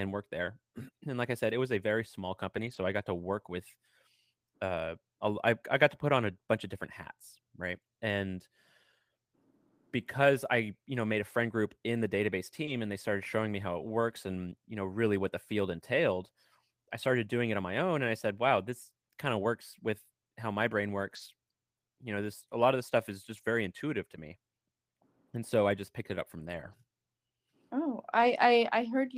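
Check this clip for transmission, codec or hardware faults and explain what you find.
Two transmission faults come from packets lost on the way to the decoder.

A lost packet rebuilt from error correction occurs at 2.57 s, 12.67 s, 21.11 s, 23.37 s, 26.39 s (after "just picked it up") and 28.11 s, lasting 0.02 to 0.34 s. Each loss was replaced by a low-bitrate copy carried in the next packet, so there is no gap, but those stretches sound rougher and noisier.

A short concealed packet loss occurs at 12.65 s, between "group in the database" and "and they started showing". About 20 ms never arrived in time, and the decoder filled it by extending the preceding sound, which leaves a brief smear.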